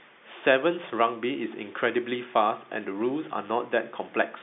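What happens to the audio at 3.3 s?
Nothing goes wrong at 3.3 s: the speech carries on intact through that moment, with the same narrow telephone band as the G.711 line it travels over.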